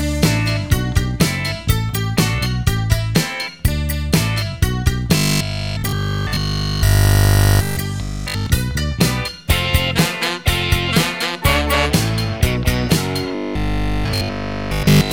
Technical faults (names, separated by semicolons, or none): robotic sound from repeated short buffers